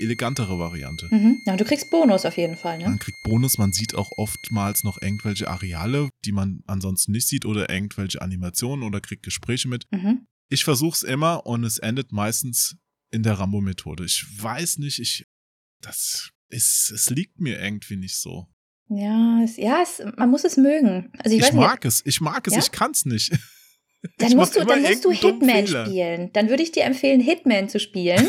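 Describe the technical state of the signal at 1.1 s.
A switching supply whistle runs from 0.0 to 6.08 s, ending before "die man ansonsten nicht": a power supply's high whistle near 2.1 kHz, about 20 dB below the speech.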